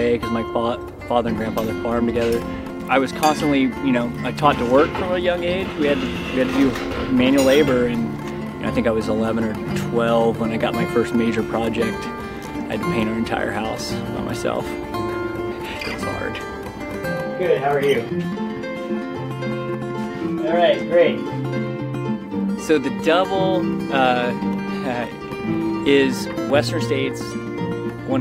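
No technical faults are audible anywhere in the recording, and the signal holds steady throughout with nothing that calls for correction.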